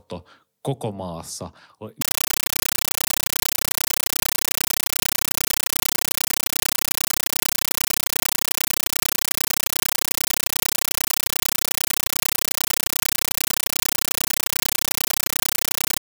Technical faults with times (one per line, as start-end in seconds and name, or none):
2.01-16.00 compressed stream played as audio